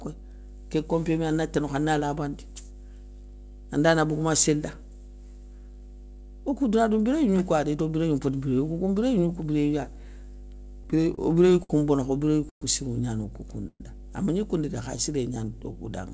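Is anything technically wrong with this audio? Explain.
Yes, there are a few problems. There's mains hum under the whole clip, a steady 50 Hz tone sitting roughly 20 dB below the speech. It's most likely a ground loop or a nearby transformer leaking the power line into the signal, and you hear it as a constant low drone with a few harmonics riding on it.

From 10.84 to 11.71 s, just before "bono kha o", there are repeated stalls (stutter). Packets kept showing up late, so the jitter buffer kept running dry, seven times in that stretch. Each time, the receiver stretched the last bit of sound to cover, the longest hold being 57 ms and about 134 ms in total. Nothing is lost, but the speech drags and hiccups.

There are two short call audio freezes, at 12.49 to 12.63 s, just before "sirou gnani", and at 13.67 to 13.82 s. Each one stops for about 120 ms, likely because packets were held up in transit and the buffer emptied. 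The last sound smears into a fading buzz or hiss and then drops to silence, for about 110 ms in the first and 50 ms in the second, before carrying on where it left off.

From 14.82 to 15.77 s, right after "amagni koundou dé", there's a jitter buffer slow-down. The receiver was rebuilding its reserve by repeating single pitch periods, which adds about 82 ms. The speech runs at about 92% speed with the pitch unchanged, so sounds come out drawn out.

The band stops at 8 kHz, which fits a G.722 call path at 64 kbps.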